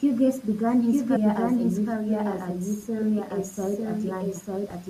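Speech, heard throughout as a doubled audio track: a second, full-band copy of the speech runs about a second behind the first and at roughly the same loudness. This is likely a second capture by a slower path or an edit holding two copies out of step. Unlike an echo or room reflection, the copy has no decay and no added room colour. At 1.15 s a brief glitch marks damaged data in a compressed stream. The decoder misreads corrupted frames, loses sync and searches for the next frame header.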